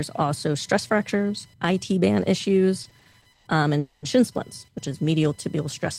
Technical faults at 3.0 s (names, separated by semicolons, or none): computer activity noise; repeated stalls (stutter)